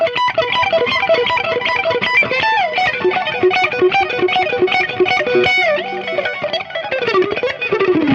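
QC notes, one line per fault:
No faults detected.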